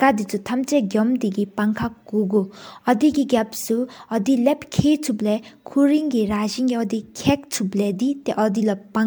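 From start to finish the speech sounds swirly, hollow and smeared, with blurred consonant attacks. This is most likely generation loss from around four successive MP3 encodes at what sounds like 128 kbit/s. A spectrogram would show patchy spectral holes and nothing above 20.1 kHz.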